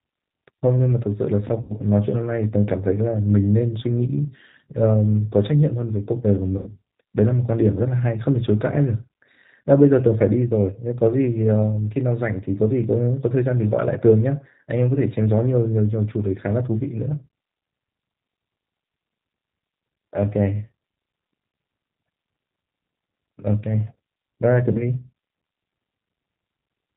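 G.729 codec damage runs through the whole speech clip, plainly audible. The 8 kbit/s coder rebuilds each 10 ms frame from a vocal tract filter, a pitch predictor and a few pulses, so nothing above 4 kHz survives and the voice sounds rough and slightly synthetic.

VoIP packet loss concealed by the speech codec strikes at 1.61 to 1.73 s, 6.57 to 6.72 s and 24.72 to 24.83 s. The decoder stretched its last pitch and filter into a fading buzzy tone or coloured noise. The first two gaps cover about 90 ms, fitting three lost packets, and the third about 30 ms, fitting one. Each disturbance lingers briefly after audio resumes.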